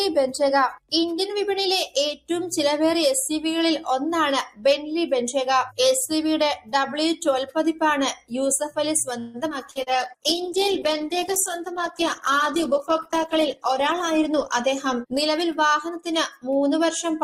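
At 2.15 s there's a short dip where the noise suppressor seems to have mistaken part of the sound for noise. For about 150 ms, to 2.3 s, the level sinks by up to about 15 dB, so whatever was sustaining there just thins out. The same sound cut by the noise suppressor comes back at 8.16 s. It again lasts about 150 ms, to 8.31 s, and is a little deeper, around 17 dB down at worst.

From 9.19 s to 9.89 s you get repeated packet loss, and it has that choppy, robotic edge. There are four separate holes in about 0.7 s, the longest 145 ms. The receiver papered over them by stretching the last bit of audio forward, which covers roughly a third of the stretch. Because the patches keep coming, the sound turns choppy and some fragments simply go missing.

Overlapping that, from 9.64 s to 10.19 s, there's a jitter buffer slow-down. The buffer was apparently running short, so the receiver padded it by repeating tiny pitch-period slices over and over. 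That adds about 37 ms in total and plays at about 95% speed with the pitch unchanged. You hear things drag a touch, mixed in with the choppiness from the losses.

At 9.72 s a call bitrate drop kicks in, and it hangs around until 17.02 s, basically the end. The bandwidth estimate fell, and the encoder's sound fits a drop from around 64 kbps down to about 12 kbps. It sits at that low rate for about 3.8 s. At that budget the coding gets coarse and the highs are cut off, so the sound goes muffled, rough and a bit watery.

Finally, from 13.26 s to 15.9 s there's a jitter buffer speed-up. Too much audio had piled up, probably after late packets arrived in a bunch, so the receiver trimmed out small pitch-period chunks repeatedly. That takes out something like 150 ms and runs at about 105% speed. The pitch stays put, but the timing feels slightly rushed, layered on top of the muffled low-bitrate sound.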